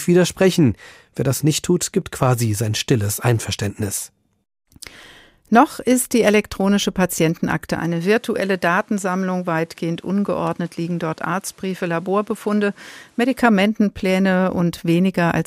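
Input switched to a poorer device from 7.79 s to 13.37 s in this speech recording. The sound turns duller, with nothing above 13 kHz, drops about 5 dB, and gains a new noise floor roughly 35 dB down, with no gap at either switch, likely a change of microphone.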